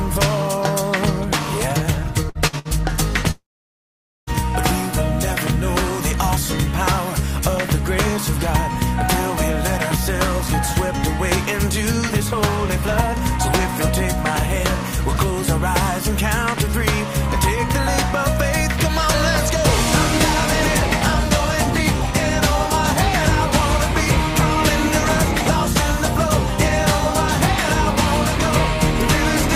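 Three short stutters at 2.29–2.38 s, 2.47–2.56 s and 2.59–2.68 s each hold the sound briefly, fading before it jumps ahead. Each is a burst of packet loss, with roughly 60 ms missing. From 3.31 to 4.30 s, the sound smears, fades and then falls almost silent for about 0.85 s before resuming further on, likely a long network dropout with nearly a second lost.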